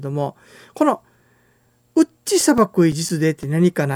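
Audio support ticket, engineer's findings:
CD scratch ticks, speech, 2.41 to 3.60 s: eight short ticks, each under about 10 ms, spaced evenly around six per second. Source likely the disc surface, with a blemish defeating error correction once per revolution and the player interpolating or muting the lost samples. The strict rotational spacing distinguishes it from random digital clicks or buffer dropouts.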